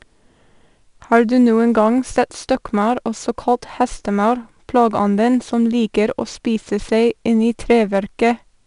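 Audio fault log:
Throughout, 4-bit ADPCM compression: each sample is coded as a coarse 4-bit step from a predicted value, with the step size adapting as it goes, so the leftover error becomes broadband noise that rises and falls with the speech level. This is plainly audible as a gritty hiss riding every loud syllable and roughness on sharp onsets. Nothing is present above 10.6 kHz, and the overall grain fits a rate near 89 kbps.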